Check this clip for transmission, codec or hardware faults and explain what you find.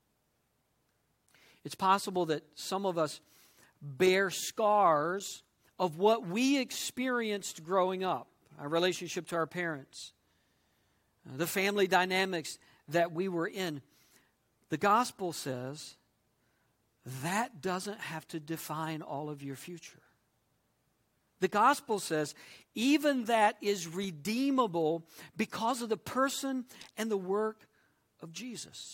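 Nothing stood out on listening to this speech recording.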